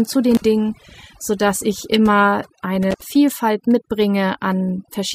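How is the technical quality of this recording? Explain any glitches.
The technical quality is compromised by one constant fault and two brief dropouts.

Overdone noise removal runs throughout: aggressive suppression zeroes bands near the noise estimate, leaving twinkling specks and a patchy, holed spectrogram.

Intermittent contact hits at 0.35–0.44 s and 2.91–3.05 s, just after "sodass ich immer". The line opens for about 49 ms and 74 ms, so the waveform drops to near-flat hiss, with crackle at each edge.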